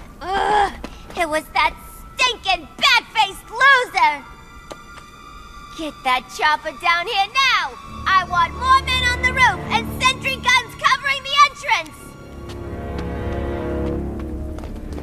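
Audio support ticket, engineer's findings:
No audible faults found.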